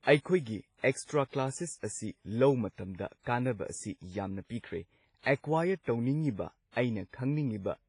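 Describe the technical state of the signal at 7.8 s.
At 7.8 s the speech carries heavy lossy-codec damage, likely WMA compression, present throughout: long transform blocks smear noise into ringing, washy hiss, and nothing remains above 10.1 kHz.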